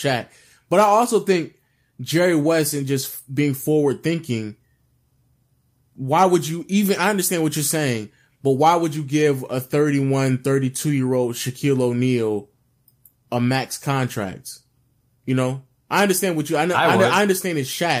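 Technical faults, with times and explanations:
No technical faults can be heard anywhere in the speech. There is nothing here to time or explain.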